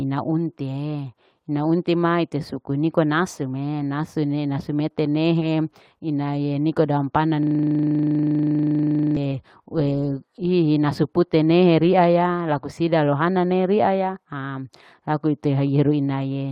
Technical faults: lost packet rebuilt from error correction; short concealed packet loss; system hang loop

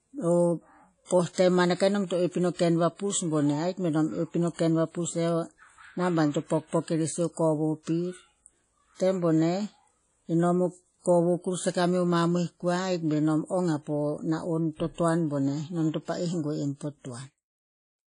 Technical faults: WMA compression; pre-echo

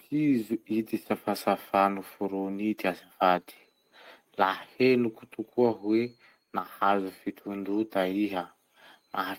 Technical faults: none

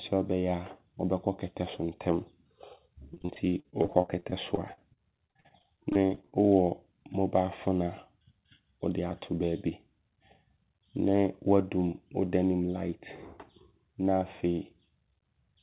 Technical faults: repeated packet loss (robotic sound)

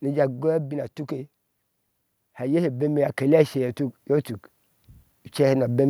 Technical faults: automatic gain falling; automatic gain rising

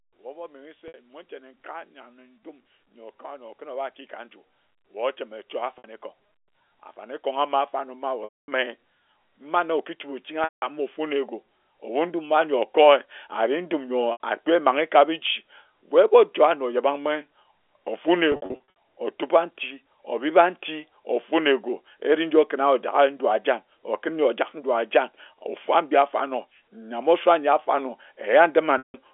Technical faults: packet loss with pitch repetition

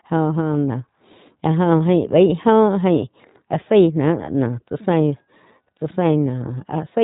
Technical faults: iLBC codec

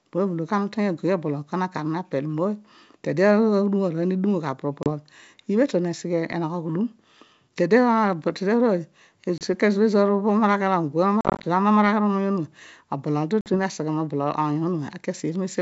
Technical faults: packet loss on an ADPCM call

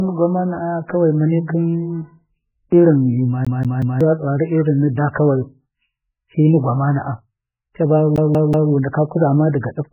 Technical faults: MP3 compression; CD stuck on one turn

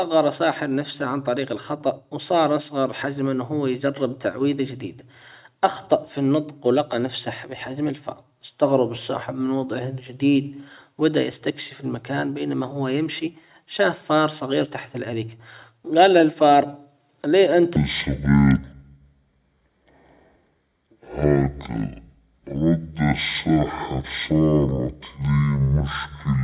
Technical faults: wrong sample rate

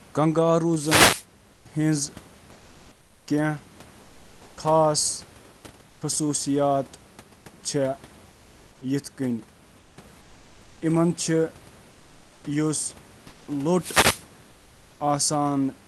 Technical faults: wireless microphone noise hit; comfort noise in place of the background

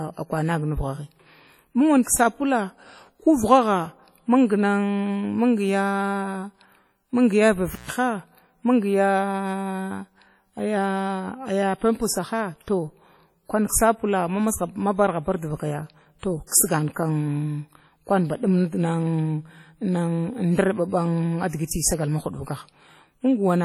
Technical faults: WMA compression; intermittent contact; pre-echo

